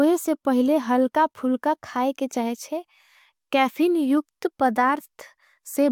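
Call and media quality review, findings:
No faults heard in this speech recording.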